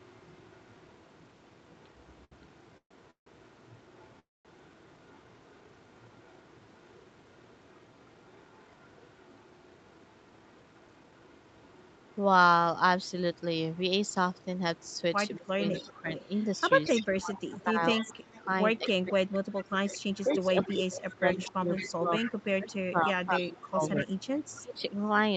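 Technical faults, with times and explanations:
0.0–12.16 s, 13.03–22.76 s and 23.34–24.82 s: echo leak. A copy of the speech returns 230 ms late. It is faint at first, about 35 dB down, then louder, about 15 dB and 20 dB down. The likely cause is a loudspeaker echo that the far end's echo canceller failed to remove.
2.24–2.32 s: short stall from a late packet. One packet arrived late, and the jitter buffer ran dry. The receiver stretched the last sound for 70 ms and then resumed where it stopped, so nothing is lost. The sound is simply held too long.
2.77–2.92 s, 3.11–3.27 s and 4.19–4.46 s: call audio freeze. Each time, the speech holds as a fading buzz and then goes quiet for 90, 120 and 210 ms. It then resumes intact, with gaps of 133, 158 and 254 ms inserted. Packets likely stalled in transit, emptying the jitter buffer.
15.37–16.08 s and 17.17–24.83 s: speech suppressed in double talk. 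The speech dips by up to about 25 dB, in pieces. This affects roughly 0.4 seconds in the first span and four seconds in the second. Both sides were talking, and the echo canceller likely muted this talker along with the echo.
18.37–20.38 s and 21.45–22.49 s: jitter buffer speed-up. The speech runs at 108% and then 107% speed with unchanged pitch, so it sounds hurried. The receiver trimmed pitch-period pieces, roughly 150 ms and 70 ms in total, to shrink an overfull buffer.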